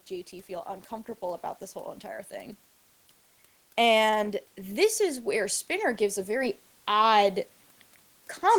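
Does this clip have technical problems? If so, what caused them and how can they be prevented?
Yes. Automatic gain rising: from 3.76 to 7.38 s the gain control treats the input as too quiet and ramps up, so speech and the faint room noise swell together by about 8 dB. To prevent it, turn off automatic gain and set a fixed microphone level suited to the speaker.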